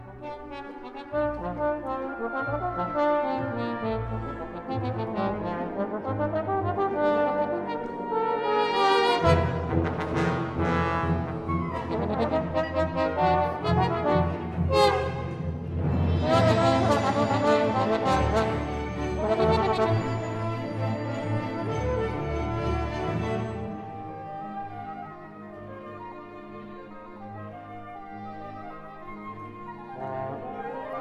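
No technical faults can be heard anywhere in this audio.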